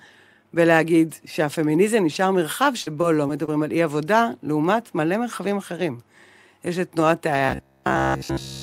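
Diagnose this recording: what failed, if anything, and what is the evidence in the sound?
Between 2.82 and 3.49 s the speech turns choppy, with four short holes patched by smeared continuations of the preceding sound. The longest hole is 39 ms, about 80 ms goes missing in total, and roughly a tenth of that span is concealed. This is repeated packet loss (robotic sound) at the network stage: packets dropped or arrived late in quick succession, and the receiver's concealment bridged each gap by extending the last good audio.

From 7.46 s to the end at 8.62 s the speech collapses into a rigid, metallic buzz pitched at 66.7 Hz that only loosely tracks the speech contour, with essentially all of the stretch built from repeats. This is robotic sound from repeated short buffers, likely at the driver or buffer stage. A 66.7 Hz buzz fits a 15 ms block being replayed over and over while fresh audio failed to arrive, so the real signal was skipped and the loop period imposed its own pitch.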